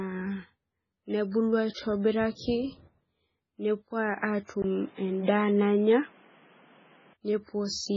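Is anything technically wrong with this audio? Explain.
Yes. The speech carries three kinds of fault.

Throughout, heavy MP3 compression is likely at work. Starved of bits, it drops weak frequency lines and nothing survives above 7.5 kHz. The sound turns watery. This fits a very low bitrate, around 16 kbps.

Pre-echo appears at 1.31 to 1.34 s and 2.35 to 2.39 s. Block-wide quantisation noise leaks ahead of sharp attacks, so a brief hiss precedes them and they smear.

From 4.62 to 7.15 s the input was likely switched to a poorer device. A 20 ms silence marks the switch. Nothing then passes above 3.9 kHz, so the sound turns dull. The level shifts by about 5 dB. New background noise sits roughly 35 dB below the signal.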